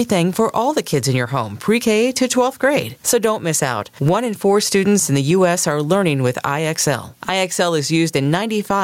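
Gain pumping runs through the whole speech clip, with a level swing of around 15 dB. The likely cause is input gain set far too high, with a fast limiter clamping every peak and squashing the dynamics.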